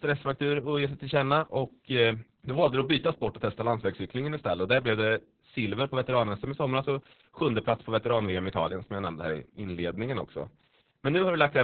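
Throughout the speech, Opus voice compression runs heavily starved, pointing to roughly 6 kbps narrowband SILK: nothing survives above 4.5 kHz, leaving it muffled, hoarse and faintly robotic.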